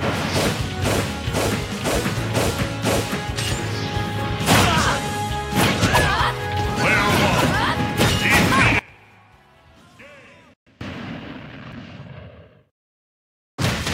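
At 8.79 s the sound cuts out abruptly in mid-flow and does not return until 10.81 s, a gap of about 2.0 s. This is an audio dropout to a faint residue. The wanted signal is lost, but the path after the break stays live. Through the gap only a faint leak of the sound remains, roughly 25 dB below its normal level. The likely cause is a brief loss of the feed upstream while the downstream chain kept passing whatever reached it. Both edges are hard switches, not a pause or a fade.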